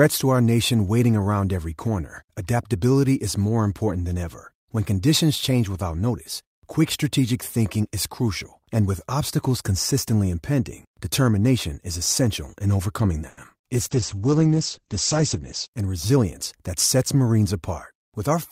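Right after "is essential in overcoming", from about 13.29 to 13.65 s, there's a burst of repeated packet loss that gives that choppy, robotic edge. Four short dropouts land inside this third of a second. The receiver covers each hole by stretching out the last bit of sound, patching in about 120 ms that way, while roughly 80 ms just goes missing, the longest single gap being 80 ms. About a third of the span is concealment, so it sounds broken up.

Straight after, from 13.68 to 14.16 s, there's a jitter buffer slow-down. The buffer had run thin or had just raised its target delay, so the receiver rebuilt its reserve by repeating tiny slices of the waveform, single pitch periods, over and over. That adds about 38 ms, and the audio plays at about 94% speed. The pitch stays put, so it just comes across as slightly drawn out and lazy.

Overlapping that, from 13.77 to 15.80 s, you get a call bitrate drop. 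The bandwidth estimate fell and the encoder got squeezed hard. The coarseness fits a fall from around 64 kbps to around 11 kbps, held at the bottom for nearly 2 s. The audio band shrinks from 20 kHz to 8 kHz, so the sound goes muffled and a bit rough and watery until it recovers.

Then, from 15.35 to 16.18 s, just before "that sets", there's a jitter buffer speed-up. The buffer was holding more than it wanted, and the receiver trimmed out pitch-period-sized chunks repeatedly to cut the delay. Around 70 ms gets shaved off, and playback runs at about 108%. The pitch holds steady, but the delivery sounds rushed.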